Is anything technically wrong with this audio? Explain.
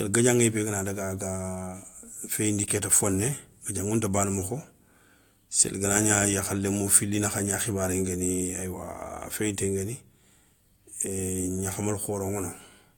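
No, nothing is technically wrong with this audio.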